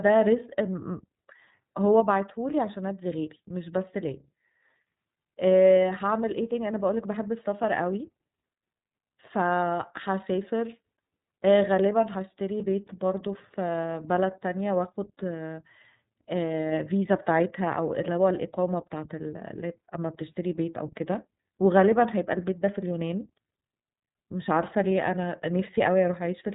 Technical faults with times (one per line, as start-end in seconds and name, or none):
0.00-26.55 iLBC codec